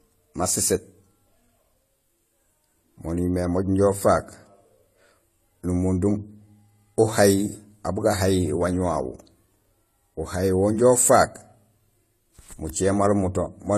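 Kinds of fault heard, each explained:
Transcoding between lossy codecs: The speech carries two layers of coding damage throughout, with nothing above 14 kHz. The likely cause is a low-rate HE-AAC encode, around 24 kbit/s, then re-encoding as AAC-LC. The second pass preserves the first pass's artefacts and adds its own.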